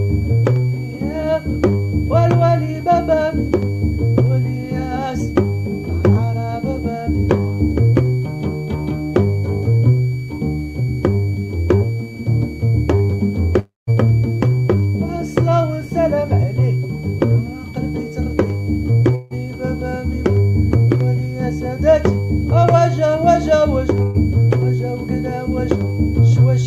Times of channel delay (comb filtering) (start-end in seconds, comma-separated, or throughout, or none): none